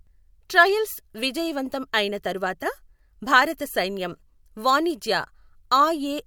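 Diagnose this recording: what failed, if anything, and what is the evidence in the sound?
No failure is audible at any stage of this speech recording, from analogue wiring through converter, buffer, format conversion, processing, network, storage and playback.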